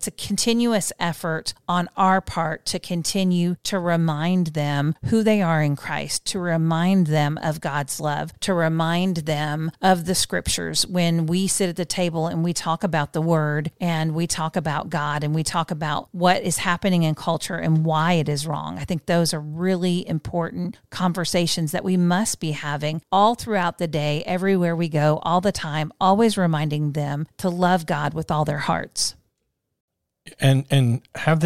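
No technical faults can be heard anywhere in the recording.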